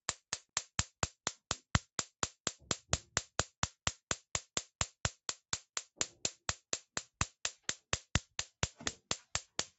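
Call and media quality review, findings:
No faults found: the audio shows only the expected character of a call path, with the lowest bass removed by the microphone processing's high-pass and nothing above 8 kHz because of the call codec's band limit, both normal for this chain.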